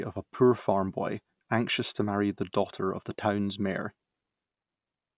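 No faults turn up anywhere in this bit of speech, so there's nothing here to pick apart.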